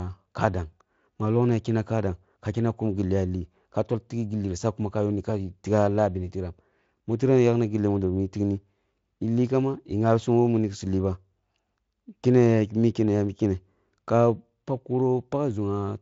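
No audible technical faults here.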